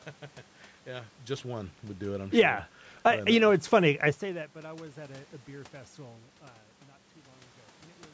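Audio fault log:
2.45–2.82 s, automatic gain rising: after "do it I'm sure", gain control lifts the quiet input about 4 dB, swelling voice and room noise together until "I uh you know".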